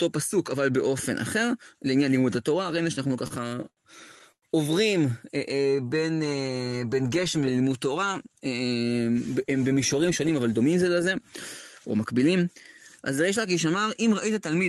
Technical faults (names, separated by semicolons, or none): repeated stalls (stutter); call audio freeze; jitter buffer slow-down; jitter buffer speed-up